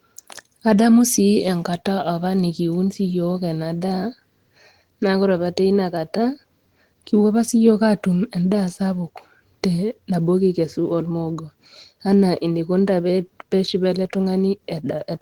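A speech recording, and nothing is technically wrong with it.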